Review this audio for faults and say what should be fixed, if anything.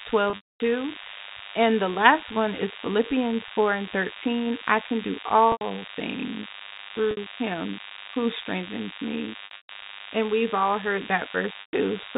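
A DECT cordless phone buzz runs throughout, a thin 100 Hz buzz with many harmonics. A nearby handset's radio bursts are rectified by the audio circuit, leaving it roughly 10 dB below the speech.

Overdone noise removal also runs throughout. Bands near the noise floor are cut hard, so the background twinkles.

Packet loss with pitch repetition occurs at 0.30–0.60 s, 5.52–5.61 s, 7.11–7.17 s, 9.45–9.69 s and 11.61–11.73 s. Repeated pitch periods bridge the gaps. The short ones sound held and buzzy, and the longest, 240 ms near the start, fades toward silence. The G.711 telephone band underneath is still heard at its usual 4 kHz limit.

Keep DECT bases away from the audio gear, use gentler noise reduction, and carry the call over a network with less loss or deeper jitter buffering.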